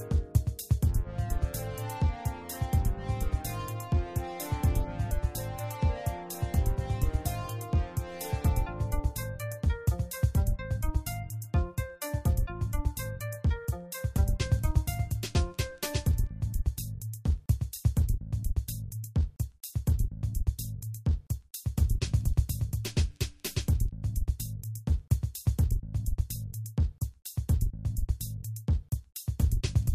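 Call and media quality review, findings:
No audible faults found in the signal; level, continuity and timing hold steady throughout, with nothing for the ticket.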